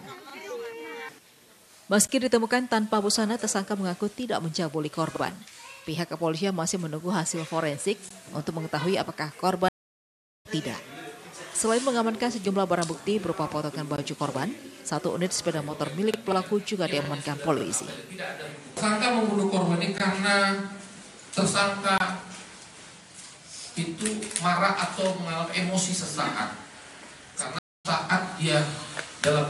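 A stream reconnect breaks the connection twice, and each time the player restarts its decoder mid-stream. From 9.69 to 10.47 s the audio drops out for about 0.77 s and resumes roughly a second further on. From 27.59 to 27.86 s a 0.26 s gap skips slightly ahead.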